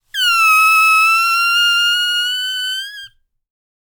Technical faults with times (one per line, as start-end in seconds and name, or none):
1.70-3.13 zipper noise